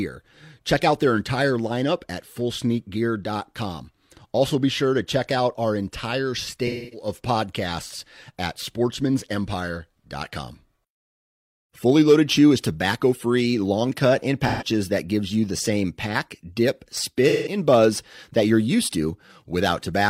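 At 6.67 s after "check out our entire", 14.47 s after "free long cut in", and 17.29 s after "the same pack dip", AAC frame loss with concealment smears the sound into a noisy, phasey patch for about 0.26, 0.13 and 0.17 s as the decoder reuses the last good spectrum.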